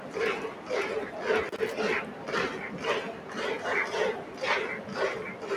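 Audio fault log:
throughout: noise suppressor applied to music or sounds. A speech-tuned suppressor treats sustained content as noise, so level swings by roughly 10 dB and tails thin out.
0.00–0.16, 0.54–0.69, 2.13–2.28, 3.14–3.31, 4.24–4.40 s: sound cut by the noise suppressor. Each span of about 150 ms sinks by about 4 dB, about 5 dB at 3.14 s, as steady sound is mistaken for noise.
1.49–1.74 s: loose connector crackle. An intermittent contact rapidly makes and breaks the signal path, chopping the audio into an irregular burst of scratchy crackle.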